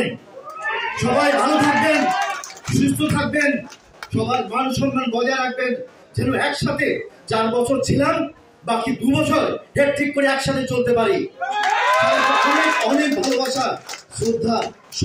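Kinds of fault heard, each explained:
No technical faults can be heard anywhere in the recording; the signal stays continuous and steady throughout.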